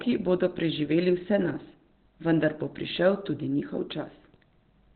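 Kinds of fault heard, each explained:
Opus compression: throughout, the speech sounds muffled and hoarse, with nothing above about 4.3 kHz. The narrow band is likely from Opus switching to its SILK speech mode, pointing to a bitrate around 12 kbps.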